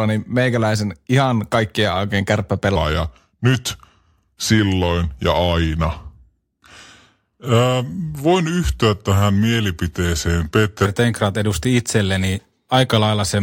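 At 2.76 s, right after "meikäläisen ihan kaikkien oikein", a section at the wrong speed begins and runs to 10.86 s. The speech plays at 0.832 times its recorded rate, so it drags and drops about three semitones, likely from being resampled against the wrong clock. On a spectrogram the harmonic stack and formant bands shift downward and stretch out in time across that span. The waveform shows syllables spaced visibly wider than elsewhere.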